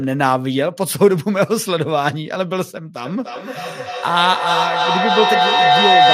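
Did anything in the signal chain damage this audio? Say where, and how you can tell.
Yes: feedback howl in the call path, from 3.05 s to the end. A loop builds a tone near 700 Hz, pulsing about every 300 ms, peaking about 4 dB above speech.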